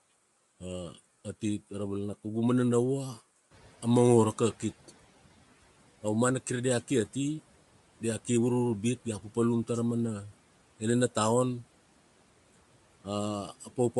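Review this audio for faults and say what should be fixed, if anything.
Throughout the speech there is a grainy, breathy edge and nothing above 11.5 kHz, most likely Bluetooth LC3 compression at a rate that fits about 48 kbps with 10 ms frames. The codec zeroes upper bands and fills them with noise. Unlike plain low-pass filtering, the top end sounds hissy and textured, not simply dull. Prevent this by giving the LE Audio link a higher bitrate or using a wired path.

From 3.5 to 4.75 s the noise suppressor is catching up: the room noise, which rises by about 19 dB at around three and a half seconds, passes through with little reduction, then sinks by about 9 dB over 1.25 s as the noise estimate adapts. Unlike gating, the change is a gradual fade rather than a sudden cut. Prevent this with a faster-tracking noise estimator.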